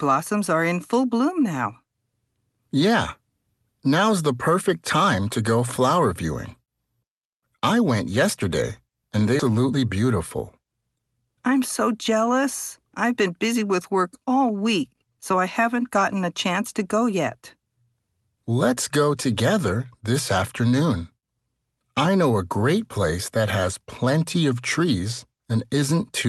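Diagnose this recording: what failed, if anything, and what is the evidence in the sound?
Network or jitter buffer stage: a skip ahead at 9.39 to 9.41 s, right after "went yesterday and they", jumps past about 0.7 s of speech, lost in transit or dropped on jitter-buffer overflow.

Jitter buffer stage: speed-up at 9.49 to 10.17 s (111%) and 10.59 to 11.04 s (114%, before "I'm so jealous I've"), each trimming about 70 ms of pitch periods, so speech hurries at unchanged pitch.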